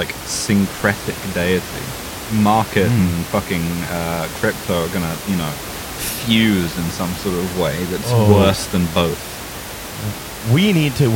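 Listening to this speech recording, nothing stood out as a technical problem; the only thing beneath the speech is the room's own background noise, sitting about 12 dB lower.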